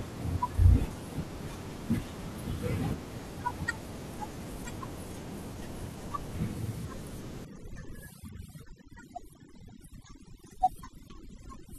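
From 7.45 s to the end at 11.79 s, overdone noise removal takes hold. The suppressor is set too aggressively, so any frequency band sitting close to its noise estimate is pushed far down or cut outright, taking the quieter parts of the speech with it. The room noise, about 26 dB below the speech, collapses into near silence sprinkled with twinkling specks. On a spectrogram the background floor goes dark, broken by isolated bright dots, while the speech harmonics look patchy with gaps. The waveform's quiet stretches flatten almost to zero.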